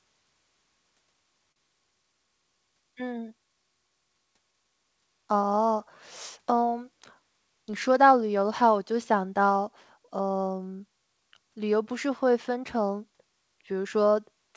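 At 1.52–1.59 s a sound hangs on with a slight buzz or dip. It is a short stall from a late packet: the jitter buffer ran empty and stretched 40 ms.

From 13.62 to 14.02 s the speech runs hurried at 109% speed, pitch unchanged. A jitter buffer speed-up trimmed some 40 ms of pitch periods to cut delay.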